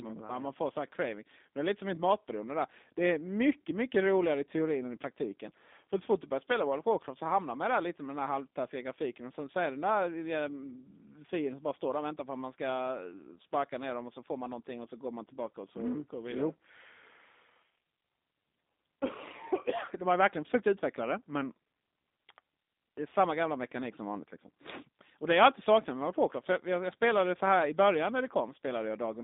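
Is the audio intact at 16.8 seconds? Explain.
No. At 16.8 seconds the speech carries G.729 codec damage, as it does through the whole clip. Speech is rebuilt from a vocal tract model, pitch predictor and sparse pulses, which fits an 8 kbit/s stream. It sounds rough and synthetic, confined to about 250 Hz to 3.7 kHz, with nothing above 3.8 kHz.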